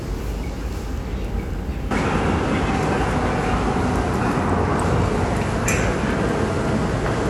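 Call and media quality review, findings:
Input switched to a poorer device, 1.91 s to end: band abruptly capped, nothing above 11.4 kHz, no gap at the switch, level shifts by roughly 5 dB, new noise floor about 30 dB under the signal. Likely a change of capture device.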